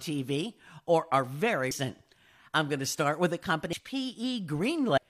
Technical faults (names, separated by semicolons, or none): damaged data in a compressed stream